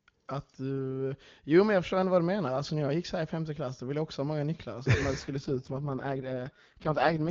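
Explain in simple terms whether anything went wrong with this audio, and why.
From 5.19 s to the end at 7.30 s, the speech turns rougher and more synthetic. This is an AMR rate drop: the network switched the HD Voice codec to a much lower rate, so less detail survives, though the sound never cuts out.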